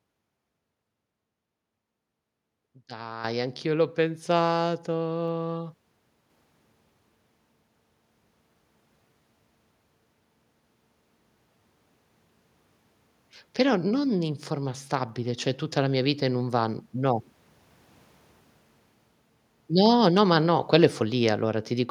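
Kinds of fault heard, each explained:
Microphone volume stepped up: the input level of the capture device was raised in a single jump rather than ramped, so everything the microphone picks up gets louder at once. At 3.24 s the speech and the background noise rise together by about 9 dB, with no fade between the two levels. Because the room noise shifts along with the speech, the change comes from the input gain and not from the talker.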